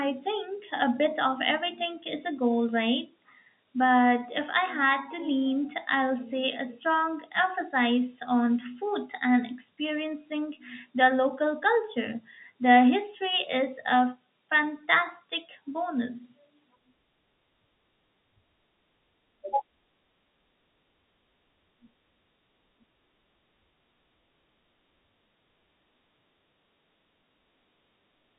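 No technical faults can be heard in this speech recording. It has passed through G.711 telephone coding, so nothing above about 3.8 kHz comes through, and any quantisation noise from the coding is faint at most.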